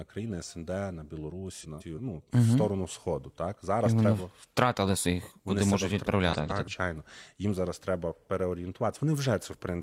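It's a speech recording with two spots where frames came out of order. From 1.61 to 1.99 s, just before "ну угу", and again from 6.33 to 6.69 s, a short stretch plays with its two halves swapped, each about 170.7 ms long, which fits runs of four frames traded places. You hear a garbled flutter, but nothing's actually missing, just reshuffled.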